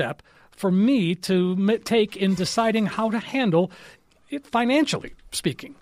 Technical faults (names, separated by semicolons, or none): none